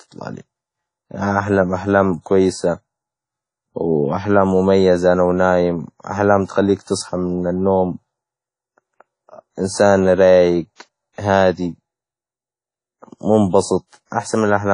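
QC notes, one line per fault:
Throughout, WMA compression: plainly audible ringing, washy speech with breathing hiss, likely a transform codec around 32 kbps; spectrogram shows a hard 10.1 kHz ceiling.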